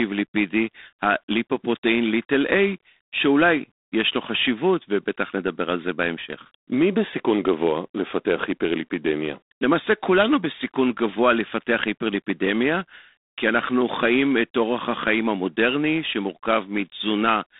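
G.726 ADPCM damage runs from start to finish. The codec sends only a few bits per sample, coding the error left after an adaptive prediction. Too few bits leave coarse quantisation noise riding on the speech. The grain is plainly audible, a harsh, rasping hiss that swells and fades with the speech level, which fits G.726 at 24 kbit/s. The line band spans about 250 Hz to 3.7 kHz. Nothing passes above 3.8 kHz, so the sound is thin and telephone-like.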